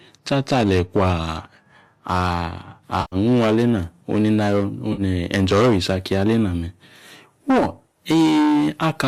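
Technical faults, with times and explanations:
3.01 to 3.16 s, AAC frame loss with concealment: a gap of about 110 ms, which fits roughly eleven 10 ms frames. The decoder rebuilt the missing stretch from the last good spectrum, so the speech turns smeared and noisy, with a hollow, phasey colour.
4.93 to 5.02 s, AAC frame loss with concealment: a shorter gap of about 50 ms. It is patched the same way and sounds like a brief smeared blur.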